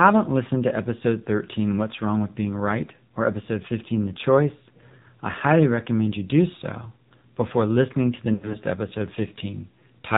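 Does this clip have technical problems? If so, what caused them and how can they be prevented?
Yes. The AMR narrowband mobile codec runs throughout. Nothing above 4 kHz survives, and the speech sounds buzzy and synthetic, which fits a low mode near 7.4 kbps. Prevent this by using a wideband codec or a higher bitrate.

Lost AMR speech frames occur from 8.34 to 8.57 s, just after "before listening to the". The decoder repeated old settings with fading gain, so the sound smears and dips for about 120 ms across 200 ms, with the longest gap at 80 ms. Prevent this with a stronger radio signal or better error protection.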